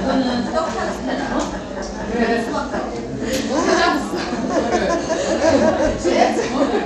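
From start to end, the treble of these sounds drops out and flickers while a gritty, aliased grain rides on top, likely Bluetooth SBC compression at a bit pool fitting about 96 kbps. Unlike MP3's swirling, its fixed wide sub-bands starve the top band outright.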